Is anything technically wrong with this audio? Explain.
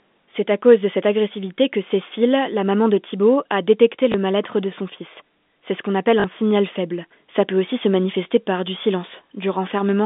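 Yes. Packet loss with last packet repeated occurs at 4.12–4.14 s, right after "a détecté", and at 6.20–6.24 s, between "ce qu'on appelle" and "signal faible". The receiver replays the previous chunk of audio over each gap. The 20 ms and 40 ms lengths fit one and two lost 20 ms packets. The replay seldom lines up with the pitch, and the longer repeat gives a brief robotic buzz. A silent dropout would leave a hole instead; here the gap is filled with repeated sound. The telephone-band G.711 coding underneath passes only 200 Hz to 3.6 kHz.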